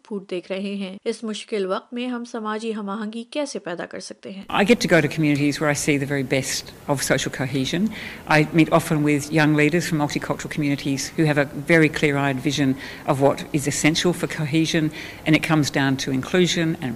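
Input switched to a poorer device, 0 to 4.43 s: the sound stops at 10.5 kHz, runs a few decibels quieter over faint added noise, then widens without a gap; a narrower-band microphone is the likely cause.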